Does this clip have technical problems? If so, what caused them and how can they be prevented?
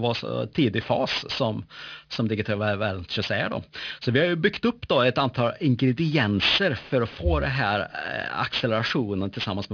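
Yes. Aliasing runs through the whole speech clip. The sibilants sound gritty and metallic because energy above 5.5 kHz has been mirrored back down into the band, which fits a drop from 48 kHz to about 11 kHz with no low-pass first. The folded content is fairly strong, roughly 10 dB under the speech. On a spectrogram, energy runs hard up to the 5.5 kHz ceiling, with inverted, unrelated streaks below it. Apply a steep anti-aliasing low-pass before resampling.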